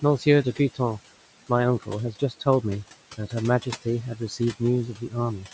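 From start to finish, noise suppressor artifacts are present. The suppressor judges which frequency bands hold steady room noise and pulls them down, frame by frame, by about 17 dB. The room noise sits only about 17 dB below the speech. Between phrases the background drops away. Under the speech it swells back. The speech sits within a band that stops at 8 kHz.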